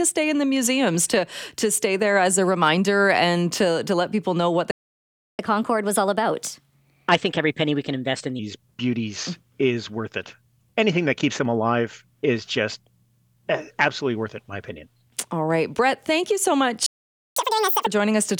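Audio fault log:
4.71–5.39 s, playback stall: right after "people know what the", the sound cuts out for about 0.68 s, then resumes where it stopped. The output likely ran dry because the player's buffer was starved of data or its thread was blocked.
5.39–8.39 s, catch-up at higher speed: for 3 s after the first stall the audio runs 1.15 times faster, and the pitch rises by around two semitones. The player resamples its backlog to regain the lost time, so speed and pitch rise together before dropping back to normal.
16.86–17.37 s, playback stall: after "thank you so", the output goes silent for about 0.5 s before the sound picks up again. The cause is likely the same: the player waited on data or a blocked thread.
17.37–17.86 s, catch-up at higher speed: for half a second after the second stall, the backlog plays at double speed, with pitch raised by around 10 semitones. This short, aggressive resampling burst makes a sharp chipmunk-like jump before normal pace returns.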